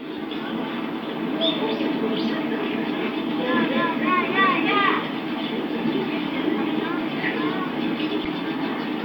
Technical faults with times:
7.00 corrupt frame decoded
8.24-8.26 corrupt frame decoded

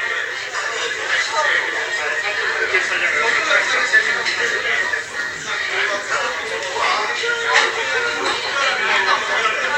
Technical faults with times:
none

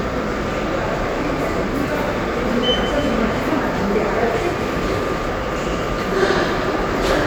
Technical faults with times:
none

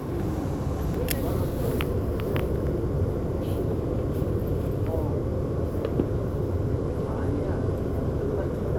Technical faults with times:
6.75-7.72 Bluetooth SBC bit pool drop

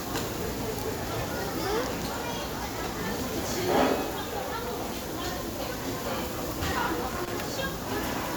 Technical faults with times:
7.08-7.33 loose connector crackle

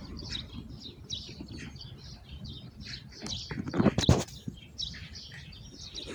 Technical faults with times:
none

